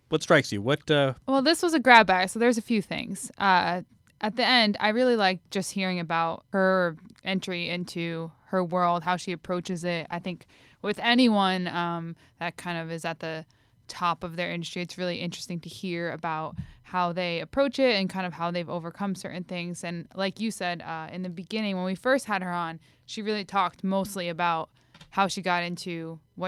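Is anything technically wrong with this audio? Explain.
Yes. From about 8.78 s to 11.45 s, right after "her entry into her" and until "um that kind of", there is a call bitrate drop. The connection's bandwidth estimate fell, so the encoder was pushed from 64 kbps down to about 21 kbps and held near that floor for roughly 2.6 s. Coding that coarse strips the upper frequencies and smears detail, so the speech turns muffled and watery until the rate climbs back.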